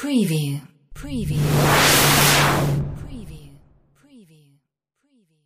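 No technical fault can be heard anywhere in this audio, and the signal stays steady and intact for its whole duration.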